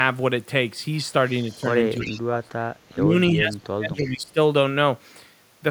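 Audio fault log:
1.49–1.75 s, 1.97–2.20 s, 4.01–4.10 s, echo leak: a copy of the speech returns 334 ms late, about 30, 15 and 25 dB below it, likely from a far-end loudspeaker the echo canceller didn't fully cancel. Unlike reverb, it's one discrete delayed repeat.
1.59–1.64 s, 2.00–2.50 s, 2.91–3.14 s, 3.31–4.38 s, speech suppressed in double talk: the talker's level sinks by about 5, 30, 20 and 20 dB while the other side also speaks, likely an echo canceller cutting both.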